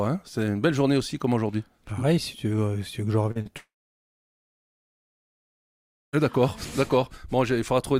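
At 3.31 s and again at 3.41 s the audio shows short concealed packet loss: about 40 ms of data went missing each time, and the receiver covered each gap by extending the preceding sound for roughly 40 ms before blending back into the real signal. Each event is heard as a brief smear or wobble, and any short sound falling inside the gap would simply be absent. The two events are 0.1 s apart.

From 3.57 s to 6.15 s comes what sounds like a long network dropout, with about 2.56 s of audio likely never arriving. The last sound is carried on briefly as a fading buzz or hiss, then the stretch goes silent for roughly 2.4 s before audio resumes at 6.15 s. The material from that missing span is gone rather than delayed.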